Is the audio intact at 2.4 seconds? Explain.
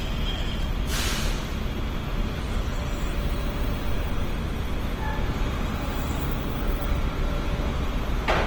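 No, Opus compression runs through the whole clip, including 2.4 s. The encoder keeps each band's energy but, short of bits, fills bands with noise or folded copies of lower ones, so tones turn grainy and rough. The damage is plainly audible and points to a low rate near 16 kbps, likely in Opus's CELT music mode, with full bandwidth kept to about 20.3 kHz.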